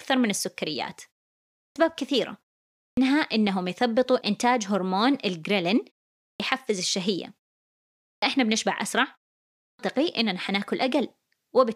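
Clipped start after a pause at 1.59, 2.82, 6.23, 8.06 and 9.63 s: the output sleeps through each short gap, then wakes late and swallows about 150 to 170 ms of onset.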